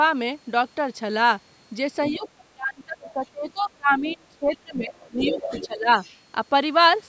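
At 2.01 s a second voice starts leaking through, about 15 dB below the talker, until 2.29 s. This is the other side's voice leaking through. The far end likely plays on a loudspeaker, and the echo canceller misses part of it. From 2.1 s to 5.38 s the talker's speech is suppressed in double talk. Both sides speak at once. The canceller likely cannot tell them apart, so it turns the talker down too. The drops reach about 25 dB and cover roughly 3 s in all. The talker dips and breaks up in pieces. During that stretch the leaked voice returns in short scraps at 3.01 to 3.12 s and 4.06 to 4.16 s, each about 25 dB down. From 4.99 s to 5.67 s it comes through strongest, about 10 dB below the talker. Suppression hits again from 5.66 s to 5.88 s, about 15 dB deep. A last faint scrap, about 30 dB down, sits at 6.0 to 6.17 s.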